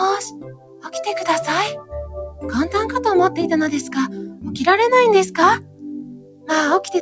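A noise suppressor applied to music or sounds runs through the whole clip. Built for speech, it treats steady, held sound as noise. Level swings by roughly 15 dB, so sustained parts and tails sink while attacks pass, giving a pumping, thinned texture. Four passages show sound cut by the noise suppressor. These are at 0.29 to 0.94 s, dropping about 17 dB, at 1.76 to 2.44 s (about 15 dB), at 4.1 to 4.45 s (about 9 dB), and at 5.58 to 6.5 s (about 17 dB). Each time, steady content is pulled down or its decay is cut short. The band stops at 8 kHz, which fits a G.722 call codec.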